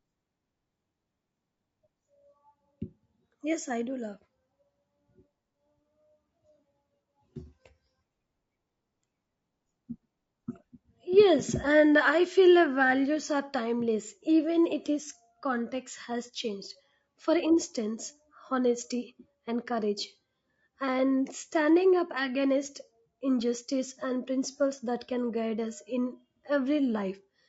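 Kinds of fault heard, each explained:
Low-delay AAC compression: the speech was likely squeezed through a low-delay codec such as AAC-ELD, whose short frames resolve pitch harmonics poorly and starve them of bits at a rate near 32 kbps, so the voice sounds plainly rough and grainy, with noise filling between harmonics throughout.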